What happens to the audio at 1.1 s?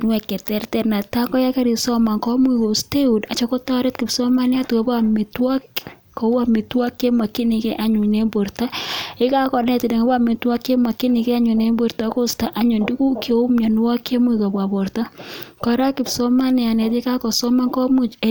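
Nothing goes wrong at 1.1 s; the speech carries on intact through that moment with no audible fault.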